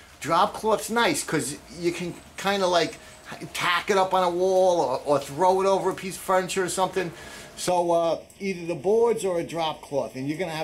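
From 7.69 s onward, channel delay (comb filtering): a sub-millisecond interchannel lag hollows the sound, cutting evenly spaced spectrogram notches from around 1.5 kHz.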